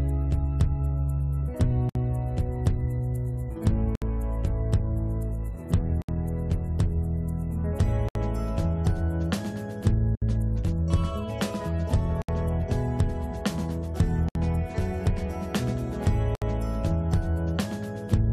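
The audio has a gap at a join of encoded pieces every 2 s, at 1.89, 3.95, 6.02, 8.09, 10.15, 12.22, 14.29 and 16.35 s. Each 60 to 67 ms silence has smeared edges. Separately encoded 2 s segments were joined without trimming, so each encoder's start delay and last-frame padding remain.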